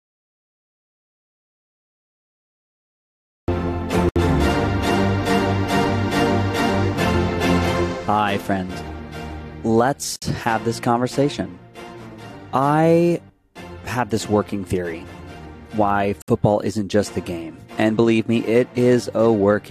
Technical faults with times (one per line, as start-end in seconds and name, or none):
0.00-3.48 audio dropout to silence
4.09-4.16 gap at a join of encoded pieces
10.16-10.22 gap at a join of encoded pieces
16.22-16.28 gap at a join of encoded pieces